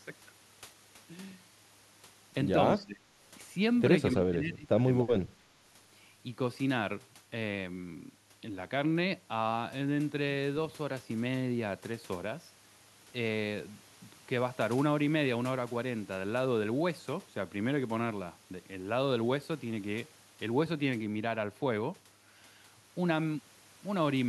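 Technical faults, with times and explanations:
2.79–3.09 s, 4.13–4.82 s and 5.04–5.53 s, speech suppressed in double talk: the voice sinks sharply, by around 20 to 25 dB at its deepest. This is likely an echo canceller unable to separate its own talker from the loudspeaker echo during overlapping talk and turning everything down.
4.99–5.03 s, echo leak: a brief, faint scrap of the voice returns about 282 ms late, roughly 15 dB below the speech. This is likely a loudspeaker echo that one side's canceller failed to remove completely and sent back down the line.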